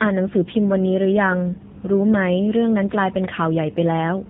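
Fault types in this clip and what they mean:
Tandem speech coding: the speech went through one low-rate speech coder, was decoded, then was squeezed again by a second one. Two lossy coders in a row means the second works on the first one's leftovers, so the damage stacks. You hear a rough, watery warble on the speech and a muffled top, with nothing above about 3.8 kHz. It sounds like a GSM full-rate leg feeding an AMR-NB leg at around 7.95 kbit/s.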